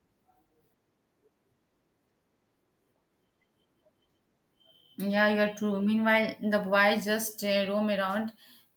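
A speech recording with no technical fault audible anywhere in it.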